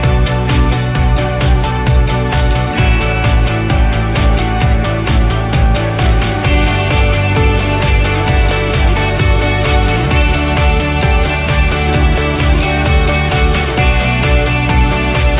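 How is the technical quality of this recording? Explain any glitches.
Nothing stood out as a glitch on listening, and the audio carries the narrow, telephone-like sound of a call path with nothing above about 4 kHz, which fits a G.711 mu-law codec at 64 kbps.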